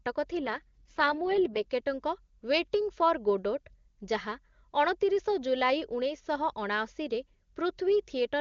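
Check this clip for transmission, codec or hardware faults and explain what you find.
There is one transmission fault, an AMR rate drop. From 0.40 to 1.67 s the speech turns rough, raspy and synthetic while the bandwidth stays put and nothing drops out. This fits the network forcing the AMR-WB codec down to its lowest mode, around 6.6 kbit/s, and spending the freed bits on error protection. Clean HD Voice quality returns once the rate climbs back.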